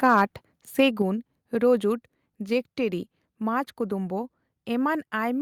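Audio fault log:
0.04–0.22 s: microphone overload. Peaks of this speech run about 1 dB past full scale and their tops are flattened, giving a harsh crackle, likely from excessive input gain.
1.02 s: microphone volume stepped down. Voice and background drop together by about 4 dB in a single step, likely the call software lowering the device's input level after the early clipping.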